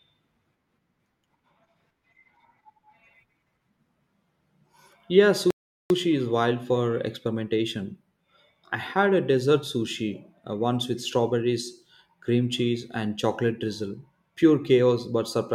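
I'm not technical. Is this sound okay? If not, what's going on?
No. At 5.51 seconds the speech stops dead for about 0.4 seconds, until 5.90 seconds, then carries on exactly where it left off. That is a rebuffering stall: playback ran ahead of the download and paused to wait. No speech is lost, only delayed.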